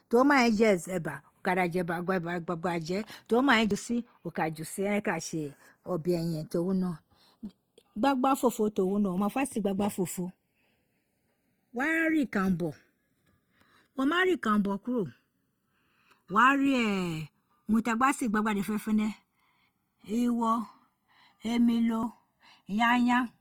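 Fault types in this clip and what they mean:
Channels drifting apart, throughout: the two channels run on clocks that differ by a few tens of parts per million, so the offset between them creeps up to about a millisecond by the end. Summed to mono, comb notches sweep slowly, heard as slow flanging on the speech.
Opus compression, throughout: the speech sounds rough and grainy, with tonal parts turned noisy rather than swirling, while the band still reaches about 20 kHz. The cause is likely Opus music-mode coding at a low bitrate, which fits 24 kbps, filling starved bands with folded or noise content.
Dropped buffer (overrun), at 3.71 s just after "to mai", 9.18 s and 22.03 s: each is a small jump forward in the sound with no gap of silence. The program probably collected its samples too late and the hardware overwrote them, costing roughly 30 ms at the first and about 10 ms at the others.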